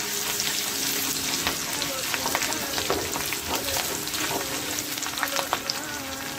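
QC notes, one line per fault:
No faults heard anywhere in the clip.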